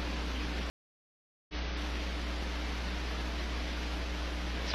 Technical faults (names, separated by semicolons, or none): stream reconnect